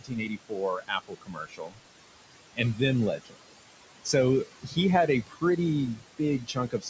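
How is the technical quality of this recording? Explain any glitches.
The recording has two noise-suppression faults: a processed background throughout and several stretches where the speech itself is pulled down.

Noise suppressor artifacts run through the whole clip. The background sinks by about 21 dB between phrases and swells under them, because the suppressor lowers the bands it judges to be steady noise, frame by frame. The room noise it works on sits about 11 dB below the speech, and the audio stops at 8 kHz.

Speech cut by the noise suppressor occurs from 0.0 to 1.8 s, 2.56 to 2.8 s, 3.17 to 3.38 s, 4.62 to 4.77 s, 5.26 to 5.43 s and 6.43 s to the end. The sound turns faint and swallowed, dropping by about 16 to 22 dB, most of all in the opening stretch, where roughly a second and a half is affected. Quiet speech was mistaken for noise and turned down with the background.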